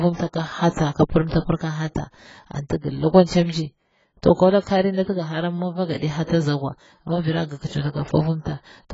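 Speech whose whole length sounds dull and smeared with a warbling, fizzy edge on sibilants, likely from heavy AAC compression at a low bitrate in the region of 16 kbps. A spectrogram shows nothing above 7.6 kHz. Pre-echo appears three times: a short hiss fills the gap just ahead of a sharp onset at 0.70–0.75 s, at 1.28–1.31 s before "pira ka", and at 6.23–6.29 s before "ozagiwa mi vira gi". Each one is a 33–54 ms smear of low-level noise that the waveform shows rising before the attack, because the transform spreads its quantisation noise back through the whole block.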